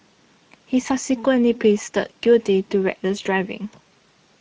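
A speech clip that has passed through the Speex codec at a low-to-middle quality setting, which fits a bitrate around 16.8 kbps, runs short of bits for the excitation signal throughout. The codec damage is plainly audible: the voice sounds noisy and hoarse, and the upper band carries a hissy, noise-like fill instead of real detail. At 3.23 to 3.27 s, VoIP packet loss concealed by the speech codec takes over: about 20 ms of audio went missing, consistent with a single lost frame, and the decoder filled the gap by extending its last pitch and filter settings at falling gain. The result is a brief stretched, smeared sound that dips and blurs, and the voice stays weak or distorted for a short time afterwards while the decoder's state recovers.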